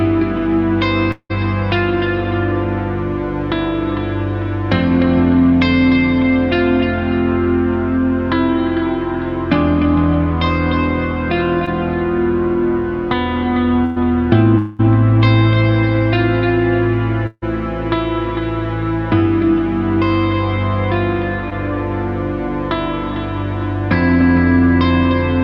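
Right at the start, from 1.11 to 1.32 s, there's what sounds like a long network dropout, the likely cause being a stretch where nothing arrived. Roughly 180 ms of audio is simply gone. The receiver stretches the last sound into a fading buzz-hiss, then you get about 70 ms of near-silence before things pick up further along, with the missing piece never coming back.

At 11.66 to 11.69 s there's a short concealed packet loss. Only about 20 ms didn't make it to the decoder, so the receiver patched the hole by carrying the previous sound forward and blending it back in. You hear it as a tiny smear or wobble rather than a gap.

At 13.85 to 13.98 s comes a burst of packet loss, about 100 ms missing in one go. The concealment holds the last sound and turns it down as the gap runs on, so it comes across as a held, dimming buzz or hiss with no actual silence. Then the audio resumes past the lost bit.

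Two more spots sound like long network dropouts. From 14.58 to 14.81 s about 200 ms goes missing, and it's covered entirely by a fading fill with no silent stretch. From 17.27 to 17.44 s about 160 ms is lost, with the fill trailing off into roughly 30 ms of quiet before the audio jumps ahead.

Last, at 21.50 to 21.53 s, there's another short concealed packet loss. About 20 ms was lost and about 10 ms patched over, and it's a quick smear or wobble.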